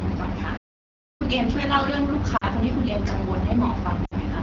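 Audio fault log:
throughout: AMR wideband (HD Voice) codec. The speech is coded as a pitch-pulse and vocal-tract model, with the top band above 6.4 kHz filled by shaped noise. It sounds plainly rough and raspy, which fits one of the lowest rates, near 8.85 kbit/s.
0.57–1.22 s: playback stall. The sound stops mid-flow for about 0.63 s, then resumes. The output simply goes silent. The likely cause is the player running out of data or its thread being blocked until it recovered.
2.37–2.45 s and 4.05–4.14 s: lost AMR speech frames. Short gaps of 40 ms and 60 ms. The decoder repeats the last good pitch and vocal-tract settings at falling gain. The sound drops quickly to near silence, then returns briefly weak or rough.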